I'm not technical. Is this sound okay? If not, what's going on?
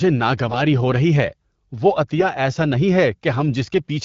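No. In two short moments, from 0.48 to 0.63 s and from 2.17 to 2.25 s, AMR bit errors occur: a weak phone link flipped a few percent of the digital bits describing the voice, so the speech briefly turns hoarse, scratchy and gargly.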